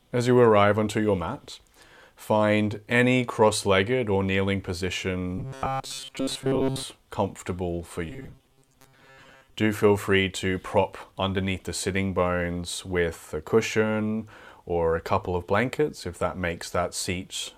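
Robotic sound from repeated short buffers hits this speech clip from 5.38 to 6.83 s and again from 8.10 to 9.55 s, a metallic 134 Hz buzz. Audio likely arrived too late, so about 7.5 ms snippets were looped, replacing most of the first stretch and about half the second.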